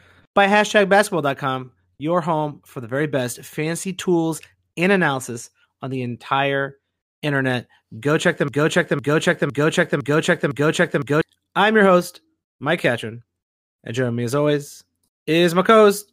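Speech, with a broken-record loop from 8.48 to 11.21 s: a 0.51 s fragment repeats identically five times, back to back. This is likely a stalled player or stream resending its last buffer. Unlike echo, the repeats don't decay, and the speech that should follow is lost.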